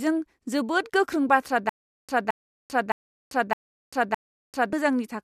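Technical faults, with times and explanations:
1.69–4.73 s, stutter with silent gaps: after "जोबोद गोख्रों बाथ्रा", a 220 ms fragment repeats five times, separated by 390 ms of digital silence, likely a stalled stream replaying its last buffer.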